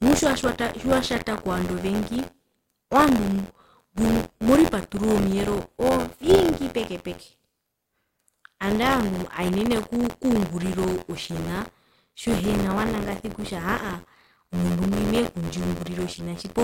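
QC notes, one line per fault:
Throughout, buffer tearing: a robotic rattle at 86.1 Hz sits on the speech and vanishes in pauses. The ring buffer's writer and reader have slipped, so about a tenth of each period replays audio from roughly 50 ms earlier, hard-joined at both ends, at a rate that fits a 512-sample buffer.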